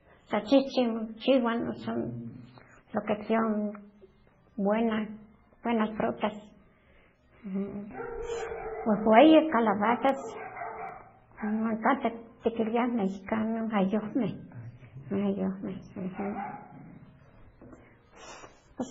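Throughout, the speech sounds watery and swirly, likely heavy MP3 compression at a very low bitrate, perhaps around 16 kbps. At 10.09 s and 10.89 s, single sharp clicks break the sound, likely dropped samples, with a handful missing so the waveform jumps abruptly.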